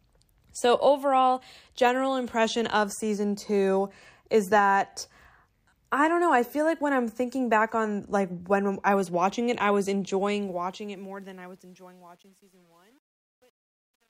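Truncation distortion on a fade runs from 10.17 s to the end, as the speech fades out over its last four seconds or so. The fade stage keeps too few bits and adds no dither, which fits about 9-bit resolution. From 11.09 s the tail turns gritty.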